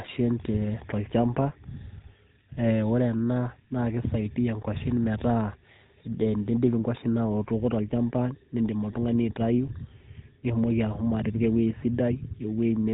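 From start to finish the speech carries GSM full-rate codec damage, and it's plainly audible. The codec rebuilds the voice from a coarse pulse excitation, so everything turns buzzy and gravelly, and the top end stops at about 3.9 kHz, which fits a 13 kbps stream.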